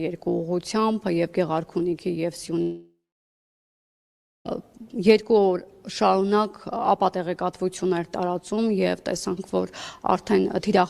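From 2.61 to 4.47 s comes a long network dropout, likely a delivery stall. The last sound smears into a fading buzz, then 1.48 s of silence. Unlike a brief packet-loss glitch, the audio resumes later with 1.84 s missing.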